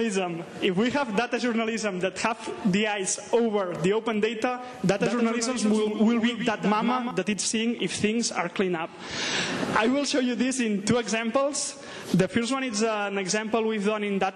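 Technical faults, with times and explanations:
4.97–7.11 s: doubled audio track. A full-band copy of the sound trails the original by about 150 ms, roughly 5 dB quieter, with no decay or room colour, and starts and stops abruptly. This likely comes from a second, slower capture path mixed in.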